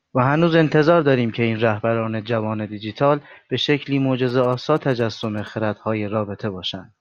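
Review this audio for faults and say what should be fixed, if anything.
GSM signalling bursts appear from 4.29 to 5.49 s in this speech recording: a galloping run of ticks and short buzzes at a repeat rate of about 217 Hz, sitting roughly 20 dB below the speech. A nearby 2G phone was exchanging brief radio bursts with its network rather than carrying a call. The audio circuit rectified that radio energy, turning the pulsed carrier into audible clicks and buzz bursts on the recording. To prevent it, keep mobile phones away from the microphone, cables and recorder, or switch them to flight mode while recording.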